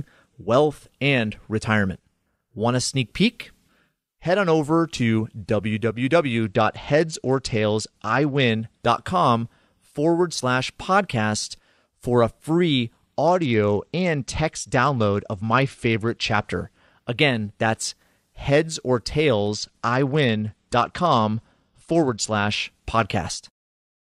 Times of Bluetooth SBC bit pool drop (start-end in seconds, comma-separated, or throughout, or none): 6.42-8.50, 13.26-16.48, 19.33-22.53